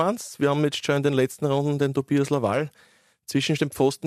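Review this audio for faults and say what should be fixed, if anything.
No faults found in the speech, so nothing needs fixing.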